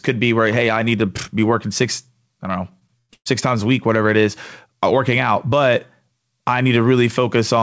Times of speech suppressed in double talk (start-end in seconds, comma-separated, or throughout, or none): none